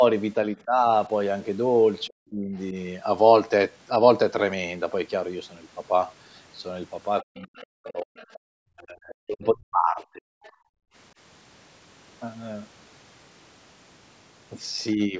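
Speech that keeps getting ducked: it's speech suppressed in double talk at 0.55–0.83, 2.08–2.55, 7.29–8.19, 8.67–10.75 and 14.94–15.2 s. The dips range from mild (about 10–15 dB) to near-dropouts (around 40 dB), likely because the echo canceller couldn't separate the talker from the far end. There's also the other side's voice leaking through, faintly, at 7.42–7.63, 7.86–8.39 and 10.44–10.50 s, roughly 25–30 dB under the talker, likely residual loudspeaker echo the canceller missed.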